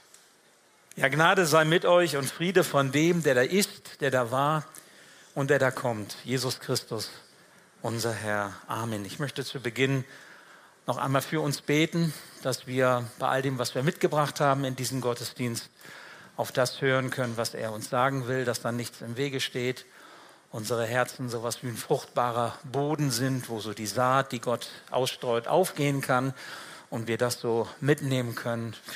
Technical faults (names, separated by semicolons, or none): none